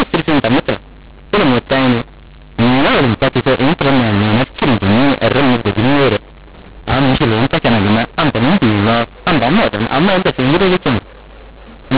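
Throughout, A-law telephone samples are decoded as mu-law, a mu-law and A-law mix-up that scrambles levels, leaving the speech harsh and distorted and filling pauses with noise.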